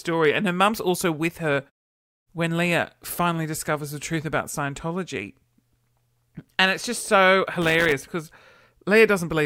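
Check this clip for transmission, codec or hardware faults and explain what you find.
One hardware fault turns up in this speech. From 7.62 to 7.92 s there is loose connector crackle: a worn contact rapidly making and breaking chops the signal, producing an irregular, scratchy burst of crackle. The muted pauses, where the background drops to silence between phrases, are expected behaviour and not a fault.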